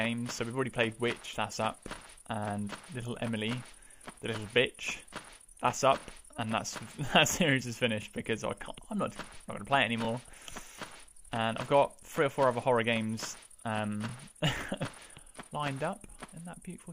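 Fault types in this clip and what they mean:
Overlapping chunks: the audio was handled in 2.0 s blocks, each starting 23 ms before the last ended, so that sliver plays twice at the joins as a short stutter or click. A waveform shows a duplicated fragment with a step, a spectrogram thin vertical lines.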